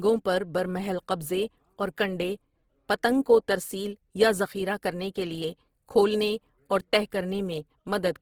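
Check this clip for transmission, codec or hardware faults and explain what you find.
One codec fault runs through the entire clip. Opus compression throughout: the encoder was likely starved of bits, about 16 kbps in CELT mode, so it refilled bands with folded or noise content, leaving the speech plainly grainy and rough while the band still extends to 20.3 kHz.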